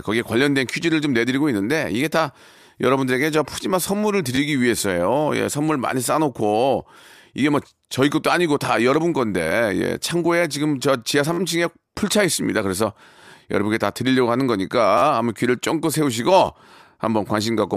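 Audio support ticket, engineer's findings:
Repeated buffer at 4.35–4.38 s, 11.33–11.38 s and 14.98–15.02 s. An 11.6 ms slice (fits a 512-sample buffer) replays with hard joins: twice extra first, then four times, giving a brief buzzy stutter. Playback underrun, nothing lost.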